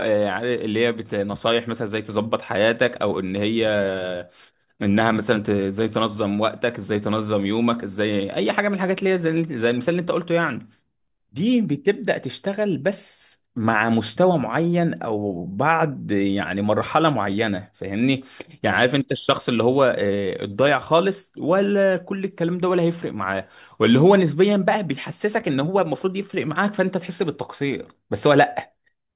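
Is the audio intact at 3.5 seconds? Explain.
Yes, the audio is intact at 3.5 seconds, with no audible fault at that point in the speech.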